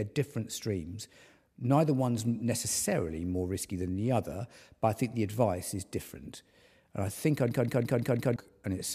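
At 7.51 s, after "I think I", the system froze in a system hang loop while the sound hardware kept replaying one 0.17 s buffer, which fits 8192 samples. Until 8.36 s this gives a machine-gun stutter at 5.9 Hz, and roughly a second of audio is lost.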